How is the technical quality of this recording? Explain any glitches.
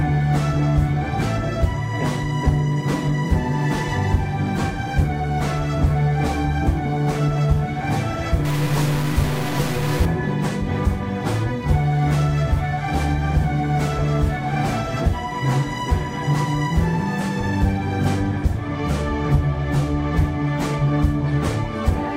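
There is one clear fault. From 8.45 to 10.05 s a stuck bit produces harsh, buzzy distortion, and quieter moments fill with grainy noise. The likely cause is one data bit held at a fixed value, so about half the samples are offset by that bit's weight, a step of about -25 dBFS.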